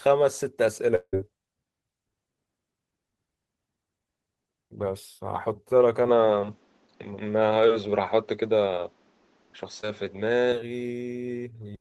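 From 0.95 to 1.15 s, a long network dropout likely cut off the incoming stream for about 180 ms. The receiver covered most of the hole by extending the last sound it had, so the speech smears into a fading buzz rather than stopping cleanly. Around 40 ms of that stretch is plain silence before real audio resumes, and whatever was said in the lost fraction of a second is simply gone.

At 6.09 s the input was likely switched to a poorer device, and that path stays in use until 10.52 s. Nothing above 7.6 kHz gets through, so the speech abruptly loses its air and sibilant sparkle and turns duller and boxier. The change happens with no gap at all. The level shifts by around 5 dB, and a new background noise floor sits roughly 40 dB under the speech. At 10.52 s the brighter, fuller tone returns just as suddenly.

Within that duller section, from 9.81 to 9.85 s, a short concealed packet loss dropped about 20 ms of audio before it reached the decoder. 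The receiver synthesised a fill from the preceding sound and blended it back into the real signal. The result is a brief smear or wobble in the speech, barely a syllable's fragment long, where a fine detail such as a consonant edge can be lost.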